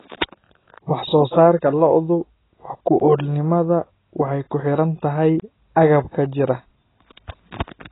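From start to finish the speech is dull and smeared, with nothing above 3.9 kHz and a fizzy texture, likely AAC compression at a low bitrate with heavy codec damage. At 3.0 s a block of digital silence cuts in for about 13 ms, and a second at 5.40–5.42 s lasts about 23 ms, which fits a 1024-sample buffer left unfilled. The first is heard as a tick or dip, the second as a short hole.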